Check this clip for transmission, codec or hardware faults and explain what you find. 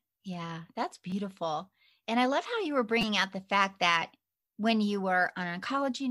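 There are two brief buzzy clicks in this speech, each a repeated buffer fault. At 1.10 to 1.12 s, a tiny slice of sound is played several times in a row with a hard join at each repeat. Another short burst follows at 3.01 s. Each time, fresh audio failed to reach the device in time, so it looped its last block. The block length of about 5.3 ms fits a 256-sample buffer, and each event drops roughly 15 to 20 ms of speech.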